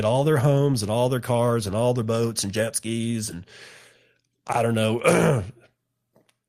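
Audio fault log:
No technical faults found anywhere in the speech recording.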